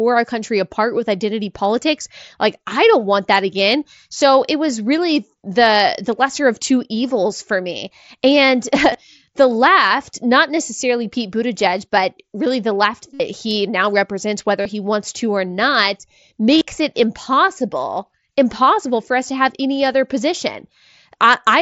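At 8.93 s and again at 19.93 s, brief concealed Bluetooth headset packet loss slips past almost unnoticed. Longer gaps follow at 13.14 to 13.20 s after "but really the left", at 14.62 to 14.66 s before "he wants to or", and at 16.55 to 16.61 s before "it impossible impossible for". In each, lost headset packets were filled by repeating a recent stretch of waveform, producing a held buzzy tone at full level with a slight warble on recovery. A true dropout would fall silent instead.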